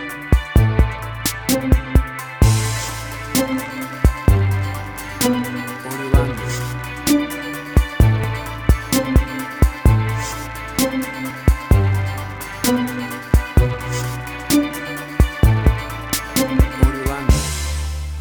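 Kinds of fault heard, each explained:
Dropped buffer (overrun): The software likely failed to read its input in time, so the hardware overwrote a few milliseconds of samples and the surrounding audio was spliced together. The result is a small jump forward in the sound at 8.24 and 11.30 s.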